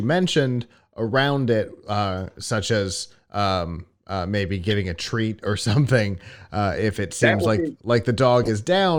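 At 4.70 to 4.72 s, and again at 8.43 to 8.49 s, the speech carries a corrupt frame decoded. Damaged compressed data was played anyway, spilling energy into wrong frequencies across a few frames. Each is heard as a brief chirp, squeak, blip or burst of noise, peaking around -15 dBFS.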